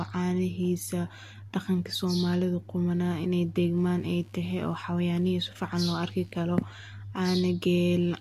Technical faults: computer activity noise

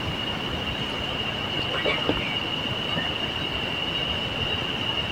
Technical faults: loud pop

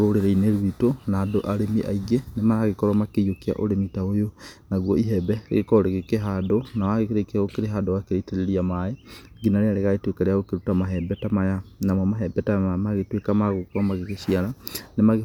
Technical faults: none

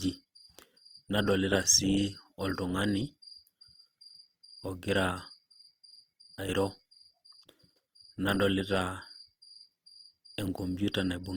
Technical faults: Opus compression

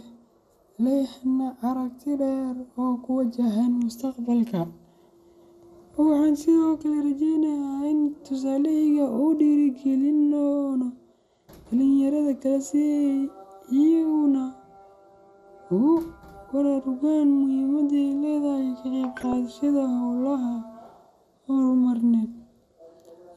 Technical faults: MP2 compression; DAB burbling

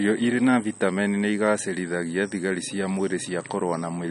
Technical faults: MP3 compression

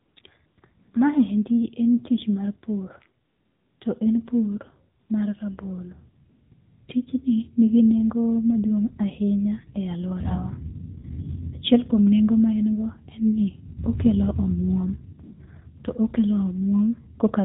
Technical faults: AMR narrowband mobile codec; AMR comfort noise

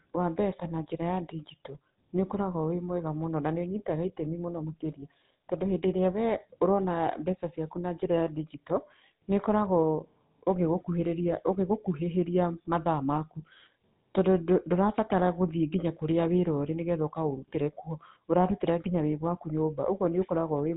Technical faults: GSM full-rate codec

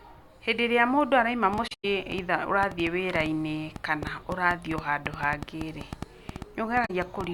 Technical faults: train of clicks; AAC frame loss with muting

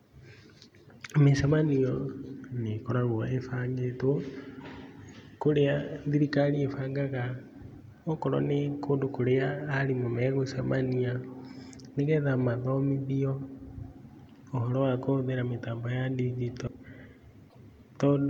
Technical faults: broken MP3 bit reservoir

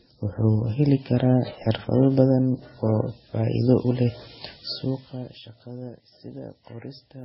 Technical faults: transcoding between lossy codecs; zipper noise

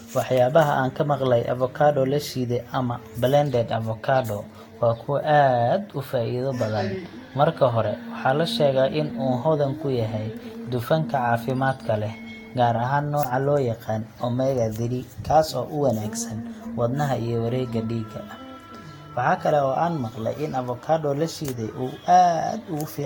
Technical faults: generation loss

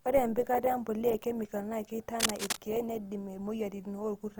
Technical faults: Opus compression; cable scratch noise

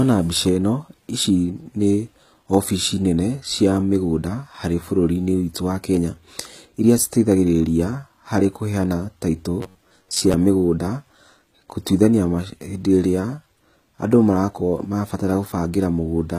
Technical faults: HE-AAC compression; robotic sound from repeated short buffers

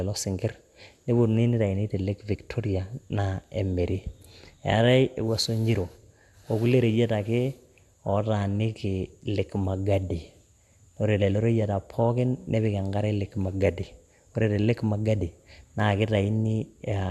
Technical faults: MP2 compression

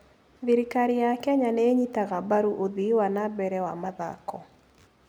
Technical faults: none

